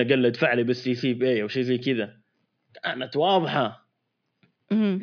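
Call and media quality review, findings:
No faults found in the speech signal; level, continuity and timing show nothing that points to a failing component or transport path.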